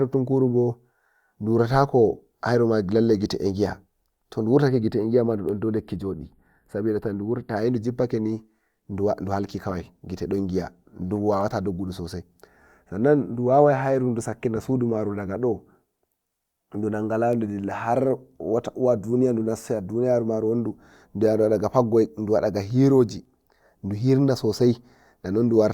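From 4.68 to 7.57 s, just after "gi'a to", the speech turns hollow, with its top end dulled as though a fixed notch were cut into the brightness. That is channel delay (comb filtering): one channel lags the other by a tiny fraction of a millisecond, which fits a delay of a few samples, and summing them to mono cancels energy at regularly spaced frequencies, the first falling near 7 kHz.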